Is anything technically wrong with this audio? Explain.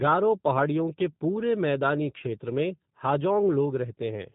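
Yes, there are two faults. Throughout the clip, the speech has been through the G.729 codec (the G.729A variant). That codec rebuilds each 10 ms frame from a vocal tract filter, a pitch predictor and a few coded pulses rather than sending the waveform itself, and it discards everything above 4 kHz. The result is plainly audible here. The speech stays intelligible but sounds muffled and slightly rough and synthetic, consistent with an 8 kbit/s stream.

From 2.18 to 2.23 s, just after "पहाड़ियों के पूरे मैदानी", there is VoIP packet loss concealed by the speech codec. About 20 ms of audio went missing, which fits a single lost packet. The decoder filled the gap by extending its last pitch and filter settings at falling gain. This smears the sound into a brief buzzy tone or coloured noise that fades. Because each decoded frame depends on the one before, the speech stays weak or distorted for tens of milliseconds or more after the gap ends.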